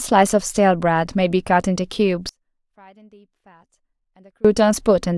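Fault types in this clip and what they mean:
Audio dropout to a faint residue: The speech cuts out abruptly for 2.15 s. Only a faint leak remains, far below normal. The signal feed was likely lost.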